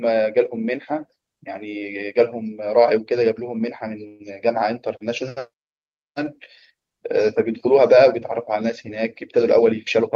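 A speech clip with two faults. At 4.07 to 4.22 s the sound stalls into a brief fading buzz or hiss for about 124 ms, then resumes where it left off; this call audio freeze was likely caused by delayed packets draining the jitter buffer. From 9.03 to 10.15 s the speech runs about 5% fast at unchanged pitch, a jitter buffer speed-up that trims short pitch-period slices, around 70 ms in total, to reduce excess delay.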